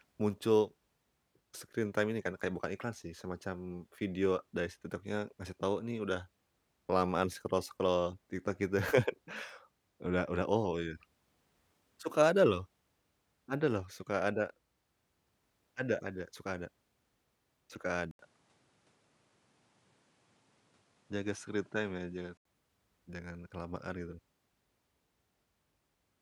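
From 18.11 to 22.45 s the input likely switched to a poorer device. An 80 ms silence marks the change, then the speech loses everything above 11.4 kHz, shifts roughly 5 dB in level and carries a faint new background noise until it clears again.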